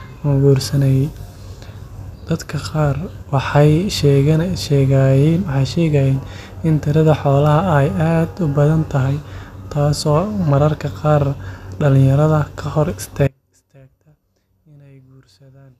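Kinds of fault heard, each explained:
Audio dropout to a faint residue: At 13.28 s the speech cuts out abruptly and stays out to the end. Only a faint trace remains, around 30 dB below the level. The likely cause is a signal break with the path after it still live.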